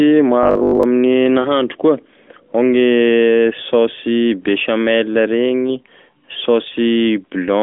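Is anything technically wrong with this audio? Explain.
Yes, there are two short problems near the start.

From 0.43 to 0.83 s the speech turns into a stiff, metallic robotic buzz pitched at 50 Hz. That's likely repeated short buffers: audio arriving too late, so the player loops the last chunk (a 50 Hz buzz fits 20 ms chunks) and skips most of the real audio.

Around 1.42 to 1.51 s there's a quick dip and warble in the voice, typical of lost AMR speech frames. About 20 ms failed its radio check, which fits one dropped frame. The decoder papered over it by reusing the previous frame's settings at lower gain, so the voice smears briefly before recovering. That's on top of the AMR-NB phone-band sound, which itself runs at roughly 200 Hz to 3.5 kHz.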